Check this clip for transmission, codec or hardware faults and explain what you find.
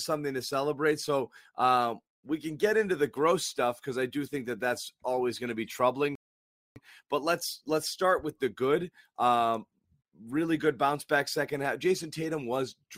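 One transmission fault is present. A rebuffering stall occurs from 6.15 to 6.76 s, just after "going to be troubling". Playback drained its downloaded audio and paused for about 0.6 s. The speech then resumes exactly where it stopped, with nothing missing.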